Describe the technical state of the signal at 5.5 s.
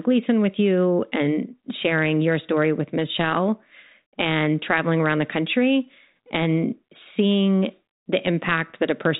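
At 5.5 s the speech is intact, carried through the 40 kbit/s G.726 ADPCM path with its band ending near 3.9 kHz and no fault at that moment.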